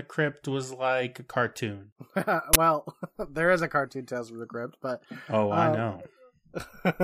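At 2.53 s, an uninitialised buffer plays. A 20 ms block of leftover memory sounds out as a short, loud crack.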